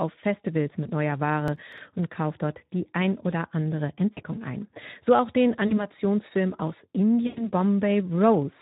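Speech encoded with the Speex codec at 11 kbps, which gives the whole recording a hoarse, noisy texture: steady codec coarseness rather than isolated events. VoIP packet loss concealed by the speech codec occurs at 0.84–0.91 s, at 4.13–4.20 s after "die ein oder andere", at 5.67–5.86 s after "auch den", and at 7.27–7.50 s. These losses run from 20 ms to 100 ms, and each time the decoder stretches the last sound into a fading buzz or coloured noise that stays weak briefly afterward. Processor overload crackle at 1.48–1.78 s, just before "und kauft dort die", is different: several very short buffers were skipped in a row, leaving hard-edged gaps heard as gritty tearing rather than a smooth fade.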